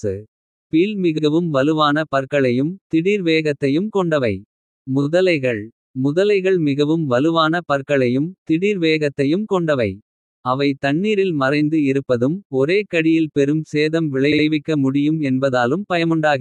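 At 1.17 s, 5.01 s and 14.31 s the speech stutters from repeated frames: a stretch of compressed data was delivered more than once, so the decoder replays it. A 64 ms block plays twice at 1.17 s, a 21.3 ms block three times at 5.01 s, and a 64 ms block three times at 14.31 s, adding 64, 43 and 128 ms.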